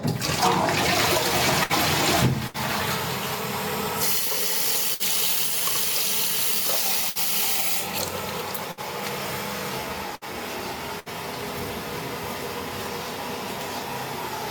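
A recording of everyday sounds with gain pumping running through all 14 seconds. The gain ducks by around 10 dB under each loud sound, so loud and quiet parts sit unnaturally close in level. The likely cause is input gain set far too high, with a fast limiter or compressor clamping down on each peak. On a waveform the noise floor rises and falls in step with the louder events, and the peaks look flattened. A burst of packet loss interrupts the audio seven times, at 1.63, 2.47, 4.94, 7.10, 8.71, 10.15 and 10.99 s, each lasting about 90 ms. In each one the receiver extends the last sound for roughly 60 ms, fading it out as a held buzz or dwindling hiss, then resumes with about 60 ms of material skipped. A spectrogram shows smeared, flat horizontal bands fading out at each of these points, followed by an abrupt jump where the audio picks up again.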